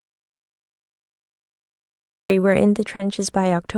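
The speech opens in dead silence, with no room tone at all, until 2.3 s. This is an audio dropout to silence, likely from lost input while silence kept being written.

From 0.33 to 0.41 s, a burst of packet loss occurs. The receiver stretched the last sound for about 60 ms, fading it, then jumped ahead past the 60 ms that never arrived.

Around 2.95 to 3.01 s, a brief smear marks short concealed packet loss. Roughly 40 ms went missing, was filled by continuing the preceding sound, and then blended back into the real audio.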